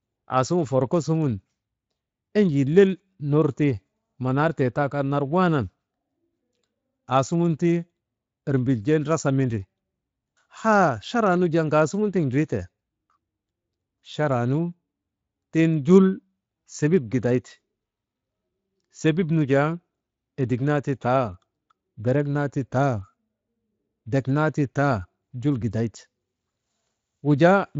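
No faults present; the speech runs through a Speex path at about 23.8 kbps with the band ending near 7.6 kHz.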